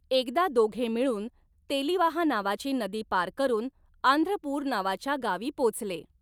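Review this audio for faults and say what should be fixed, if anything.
Small hiccups and a slightly hurried, uneven tempo recur throughout. This is clock drift between sender and receiver: the sender's clock runs around 5 percent fast, so the jitter buffer keeps overfilling.

From 0.04 s to 6.11 s, brief pieces keep vanishing at irregular spacing. These are repeated timing corrections, where the receiver trims audio to keep pace with a sender running at 105 percent speed.

To prevent this, lock both ends to a common clock or resample adaptively at the receiver so the drift is absorbed smoothly instead of by cutting pieces.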